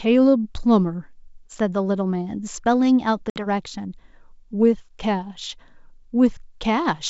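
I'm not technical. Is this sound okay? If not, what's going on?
No. At about 3.30 s the speech drops out abruptly, and the hard-edged hole runs to about 3.47 s. This is packet loss on an ADPCM call: about 60 ms of speech in a few packets never arrived. Afterwards the receiving decoder briefly guesses wrong, so speech resumes slightly distorted before settling.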